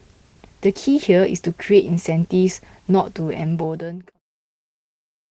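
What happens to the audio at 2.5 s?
At 2.5 s the speech plays through intact, with no dropout, click or other disturbance.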